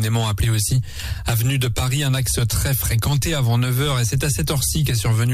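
No technical faults are audible.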